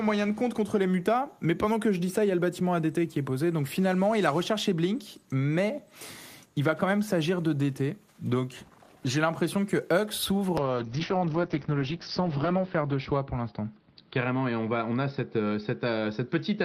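At 10.59 s a call bitrate drop begins and lasts to the end. The encoder, starved of bits, codes coarsely, so the sound turns rough and muffled. On a spectrogram, energy that reached 20 kHz is cut off above 6 kHz, which fits a fall from 32 to 7 kbps.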